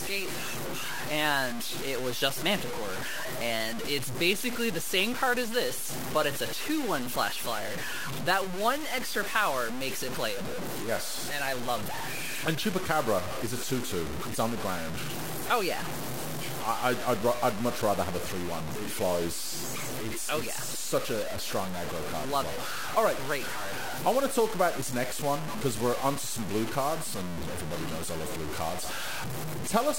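From start to finish the speech carries a harsh, grainy distortion that rises and falls with the signal, sitting only about 10 dB below it, with quiet passages sputtering. The likely cause is low bit depth without dither: truncation to what sounds like about 4 bits.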